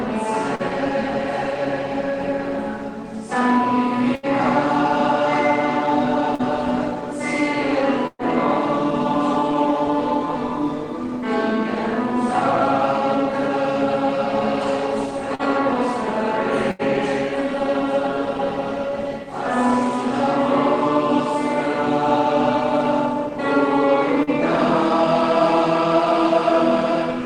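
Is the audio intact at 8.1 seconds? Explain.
No. From 8.07 to 8.22 s the sound just before the gap is stretched out and fades over about 120 ms, the last 40 ms or so of it near silence, then picks up again with roughly 120 ms of audio skipped. This is a burst of packet loss: several consecutive packets never arrived in time, so the receiver filled the gap by continuing and fading the last sound, then resumed further along.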